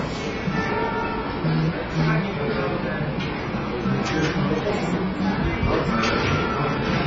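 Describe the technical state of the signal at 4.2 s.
At 4.2 s the signal shows heavy damage, most likely from AAC compression, present across the whole clip. The encoder, starved of bits at a rate that fits roughly 16 kbps, has discarded everything above 7.5 kHz and quantised the remaining bands coarsely, leaving gaps in the spectrum. The sound at that moment is dull and smeared, with a warbling, fizzy texture where sustained or noisy content would otherwise be clean.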